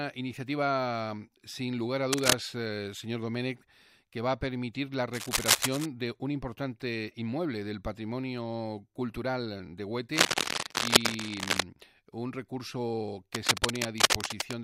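Bursts of cable scratch noise appear four times: 2.10 to 2.33 s, 5.13 to 5.86 s, 10.12 to 11.63 s, and 13.34 to 14.54 s. Each is a dense, ragged rustle laid over the sound, somewhat louder than the sound itself. The first three bursts grow longer as the clip goes on. The likely cause is a worn cable or connector being moved. Its contact resistance shifts rapidly and injects uneven noise into the signal.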